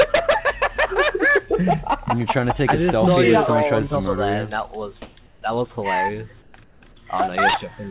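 The sender likely stopped transmitting during quiet stretches, and the receiver filled the gaps with synthetic comfort noise in place of the background at 5.02–5.16 s, 5.26–5.42 s, 6.42–6.54 s and 6.64–6.82 s. Each gap becomes flat, featureless hiss, about 12 dB louder the first time and about 3 to 6 dB quieter thereafter, with nothing above 4 kHz.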